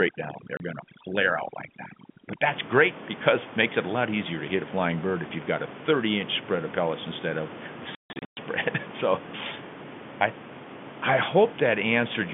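From the start to 2.47 s the speech passes through overdone noise removal. A suppressor set too aggressively drives each frequency band down whenever its level nears the estimated noise floor, so the room noise, about 13 dB below the speech, collapses into near silence speckled with twinkling fragments, and the quieter parts of the speech vanish with it. Unlike a dropout, nothing stops outright; the sound is eroded band by band.

Inside that stretch, at 0.57 s, comes the first packet loss filled with silence: a single 30 ms hole with hard edges, which fits a 30 ms packet length. The second burst runs from 7.95 to 8.37 s, where about 330 ms goes missing, scattered across 420 ms, with the longest gap lasting 150 ms. Every gap is a whole multiple of 30 ms and falls to silence, which sets it apart from the gradual thinning of the noise removal and from any smoothed-over concealment.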